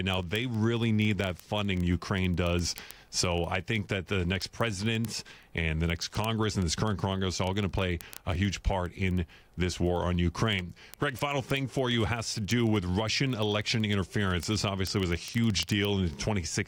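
From 0.10 s to 16.67 s, word clock ticks run under the speech. A receiving device is reading a digital link on its own clock, not locked to the sender's. The two clocks disagree by roughly 700 parts per million. Each time they slip past each other, one sample is dropped or repeated. That happens about every 30 ms, around 500 times across the clip. The result is a steady stream of ticks, like a fast clicking of uneven strength.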